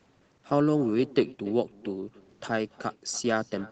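From start to finish, each phrase of the speech is trailed about a third of a second later by a faint, thin copy, about 20 dB below the talker. This is echo with no canceller: the far end's loudspeaker feeds its microphone, and that sound returns over the 8 kHz-limited call path.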